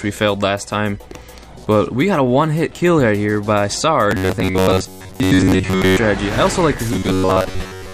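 From 4.11 to 5.99 s and again from 6.93 s to the end, the sound turns into a rigid, metallic buzz fixed at 93.8 Hz, likely robotic sound from repeated short buffers: roughly 10.7 ms chunks looping in place of most real audio. Unlike silent dropouts, the gaps are filled by a steady pitched drone.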